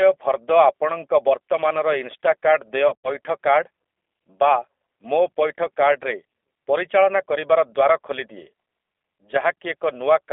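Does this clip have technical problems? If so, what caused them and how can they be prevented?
Yes. The speech went through the G.729 codec, which rebuilds each 10 ms frame from a vocal-tract filter, a pitch predictor and a few pulses, consistent with an 8 kbit/s stream. Throughout, the band is confined to roughly 300 Hz to 3.5 kHz, and the voice has a plainly rough, synthetic edge. To prevent it, carry the call with a wideband, higher-bitrate codec such as G.722 or Opus.

From 2.88 to 3.09 s, VoIP packet loss was concealed by the speech codec. About 120 ms of audio went missing across 160 ms, with the longest gap 80 ms. The decoder stretched its last pitch and filter with falling gain, producing a fading smear of tone or noise, and the voice stays weakened as it recovers. To prevent it, improve network reliability and add a jitter buffer with forward error correction or redundancy.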